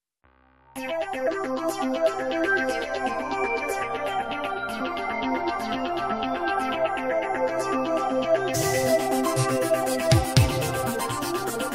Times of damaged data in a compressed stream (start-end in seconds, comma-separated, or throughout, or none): 1.27-1.29, 4.80, 8.53, 11.00